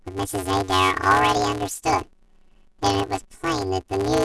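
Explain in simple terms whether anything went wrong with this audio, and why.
The speech sounds robotic and buzzy from start to finish. This is planar audio read as interleaved. Left and right come in separate blocks, but they were read as alternating pairs. The blocks are tiny, about 5.33 ms each, which fits 128-sample blocks. So they repeat at 188 Hz and cause a steady buzz.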